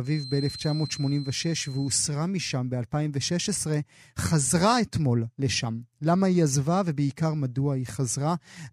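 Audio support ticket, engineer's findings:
Feedback whistle, 0–2.0 s: thin tone at 4.1 kHz, around 15 dB under the speech. Likely speaker-to-mic loop held just at the feedback threshold.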